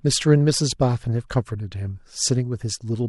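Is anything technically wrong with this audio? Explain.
No, nothing is technically wrong with this audio.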